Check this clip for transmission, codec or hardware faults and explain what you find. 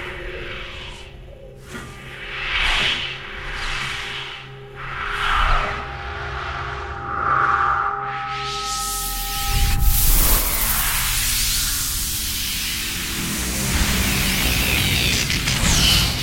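No transmission, codec or hardware faults turn up in this clip.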